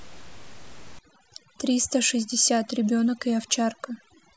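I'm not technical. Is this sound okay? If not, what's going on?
No. From about 0.99 s to the end, there is overdone noise removal. A noise-cleaning step was set too strong. It removes quiet parts of the voice along with the room noise. The background drops and breaks up into twinkling specks.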